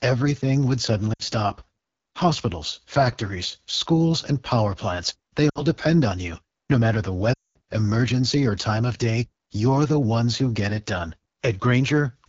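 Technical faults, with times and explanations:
Throughout: AMR wideband (HD Voice) codec. The sound is plainly rough and raspy, with a buzzy, gritty edge rather than the clean clarity of higher AMR-WB rates. That points to one of the lowest modes, around 8.85 kbit/s. Too few bits reach the pulse excitation, so the vocal tract model is driven coarsely. The top band near 6.4 to 7 kHz is filled with shaped noise, which adds a hissy air instead of real detail.
1.13–1.22 s, 5.49–5.64 s, 7.33–7.58 s: lost AMR speech frames. The first two losses last about 60 ms each, which fits three dropped 20 ms frames. The second falls between "and power plants they" and "depend on you" and drops to near silence. The third, between "matter the" and "emergency or time of", runs about 220 ms. It drops to near silence within two frames and comes back weak or rough. The decoder repeats the last good pitch and tract settings at falling gain, which separates these gaps from simple dropouts or clipping.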